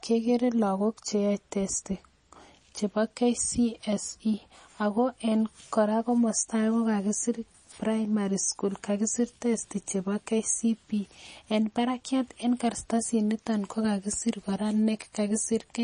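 From start to finish the speech has a hard ceiling at 9.8 kHz and a watery swirl on sibilants, likely MP3 compression starved at something like 32 kbps.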